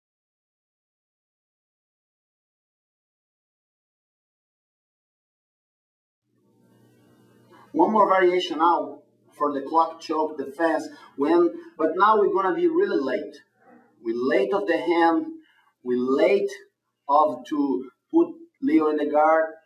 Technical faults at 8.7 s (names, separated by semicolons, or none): none